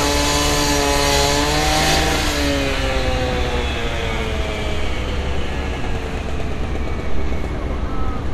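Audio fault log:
throughout, MP2 compression: the encoder likely ran short of bits, consistent with a low rate around 80 kbps, so upper sub-bands were dropped and the rest coarsely quantised. Nothing sounds above 14.4 kHz, and the audio is dull with plainly audible gurgling, granular distortion.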